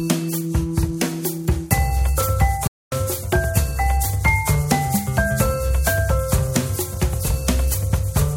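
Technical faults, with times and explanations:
2.67 to 2.92 s, playback stall: the music cuts to silence in mid-flow for about 245 ms, then carries on. The likely cause is a player that ran short of data or had its thread blocked, so nothing reached the output until it recovered. Unlike a dropout of a few milliseconds, which registers as a click or tick, this gap is long enough to hear as a distinct hole in the music.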